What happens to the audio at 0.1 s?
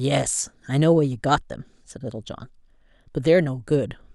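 Nothing goes wrong at 0.1 s; the speech there plays through intact, with no dropout, click or distortion.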